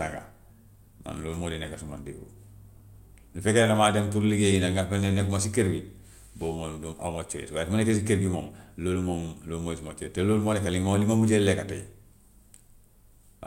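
No faults can be heard anywhere in this speech recording.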